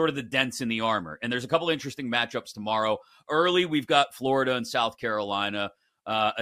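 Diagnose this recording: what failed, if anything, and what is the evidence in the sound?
Nothing failed in this recording, and the sound carries no evidence of a fault at any stage.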